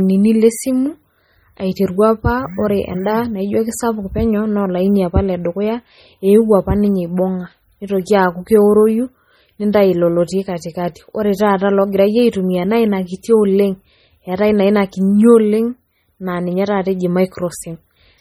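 MP3 compression artefacts run through the whole recording, from start to finish, and are heavy. The speech sounds watery and swirly, with s sounds turned into metallic chirps. The likely cause is an MP3 encode starved of bits, at a rate that fits roughly 32 kbps. Short of data, the encoder zeroes weak frequency lines that switch on and off between frames.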